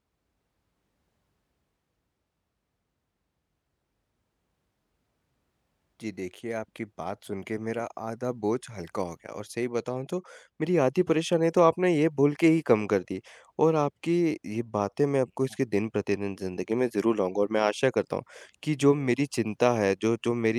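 No technical faults can be heard anywhere in the speech.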